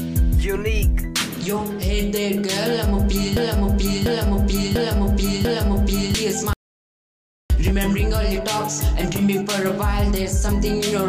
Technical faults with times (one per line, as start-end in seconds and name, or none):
3.37-6.14 broken-record loop
6.53-7.50 audio dropout to silence